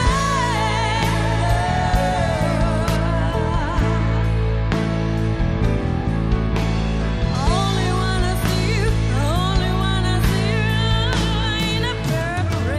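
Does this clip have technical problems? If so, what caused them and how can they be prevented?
Yes. From 2.96 s to 7.35 s, de-emphasis was applied wrongly: a treble-cut filter meant to reverse pre-emphasis acted on audio that either had no pre-emphasis or had already been de-emphasised once. The cut slopes down smoothly with rising frequency, reaching about 10 dB down at 10 kHz relative to 1 kHz, so that stretch sounds dull and muffled. To prevent it, confirm whether the source carries pre-emphasis and apply the matching de-emphasis exactly once in the chain.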